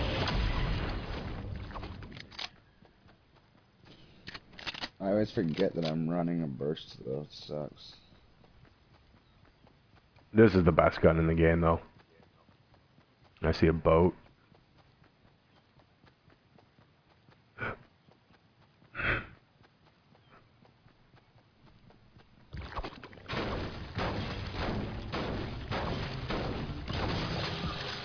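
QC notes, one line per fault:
Throughout, aliasing: the audio was taken down from 44.1 kHz to an 11 kHz rate with no anti-alias filter ahead of the conversion, so everything above the 5.5 kHz fold point reflects back into the band as wrong, unrelated frequencies. The folded energy sits roughly 20 dB below the wanted signal and gives sibilant and bright content a gritty, metallic edge. A spectrogram shows energy running hard up to 5.5 kHz, with mirrored, inverted-slope traces where none belong.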